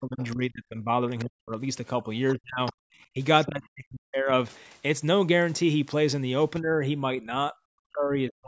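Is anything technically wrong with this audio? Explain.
Yes. Two kinds of fault are audible in this speech.

Speech suppressed in double talk occurs at 0.00–0.93 s, 1.24–1.61 s, 2.02–2.60 s, 3.14–4.32 s and 6.61–8.47 s. The talker's speech dips sharply, by about 30 dB in the first stretch and about 40 dB in the rest. The likely cause is an echo canceller facing talk from both ends. It could not tell the talker from the loudspeaker echo, so it turned everything down.

The other side's voice leaking through is heard at 0.21–0.36 s, 2.29–2.33 s and 2.66–2.73 s. These are brief scraps of a second voice. The first two sit about 25 dB below the speech, and the last about 15 dB below, so it stands out more. This is likely far-end audio from the loudspeaker that the echo canceller did not fully remove from the microphone. The call's bandwidth stops at 8 kHz, so these scraps have no high end above that.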